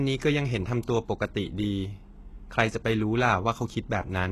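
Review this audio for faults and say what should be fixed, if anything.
HE-AAC compression, likely, throughout: the upper band is rebuilt from copied lower bands with nothing above 12.3 kHz, leaving plainly audible synthetic treble that fits a bitrate near 16 kbps. Encode from the original source at a higher bitrate or with a codec mode that codes the full spectrum.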